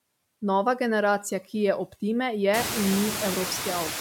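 Noise suppressor artifacts run through the whole speech clip. The suppressor judges, frame by frame, which frequency bands hold steady noise and pulls them down by about 20 dB, so the background drops away in the gaps between speech and comes back up underneath it. Around two and a half seconds the room noise climbs by about 24 dB to sit only about 8 dB below the speech.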